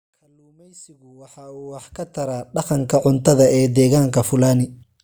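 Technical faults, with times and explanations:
Nothing technical stands out in this speech clip; it just eases in with a gentle fade from the very start that reaches full level at about 3.02 s, the way an editor would shape an opening.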